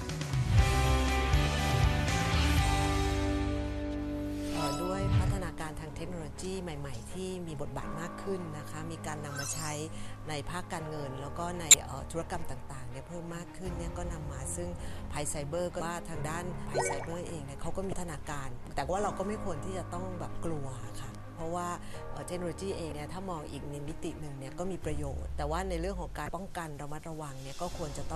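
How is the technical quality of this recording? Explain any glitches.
The recording is marred by five brief glitches from damaged data in a compressed stream, at 11.71–11.74, 15.78–15.81, 17.90–17.93, 22.89–22.92 and 26.26–26.29 s. Each lasts about 35 ms. Corrupted bytes make the decoder misread frames, lose sync and hunt for the next valid header, producing a short chirp, squawk, click or hole.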